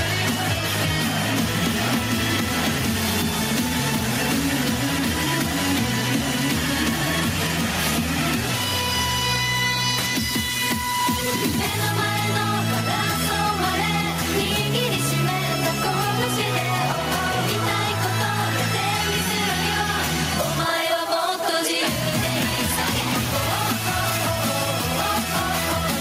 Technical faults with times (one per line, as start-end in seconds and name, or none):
0.00-26.00 gain pumping